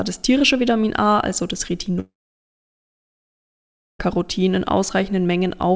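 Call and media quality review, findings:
Speech cuts out after "also das" at 2.00 s: brief fading buzz continuing the last sound, then about 1.9 s of silence, audio resuming at 4.01 s with about 2 s of speech lost. Likely cause: long network dropout, with receiver concealment stretching the final frame before muting. G.722 call path at 64 kbps, nothing above 8 kHz.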